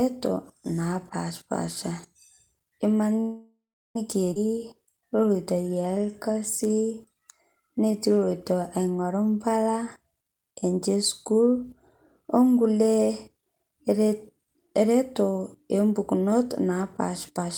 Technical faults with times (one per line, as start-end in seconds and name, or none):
3.20-3.96 call audio freeze
4.34-4.36 skip ahead
4.47-8.00 jitter buffer slow-down
10.96-11.64 jitter buffer speed-up
17.29-17.49 jitter buffer speed-up